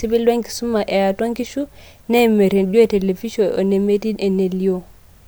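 No technical faults can be heard in the speech at any point.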